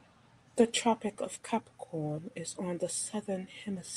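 No technical faults can be heard anywhere in the recording; the speech signal stays continuous and intact throughout.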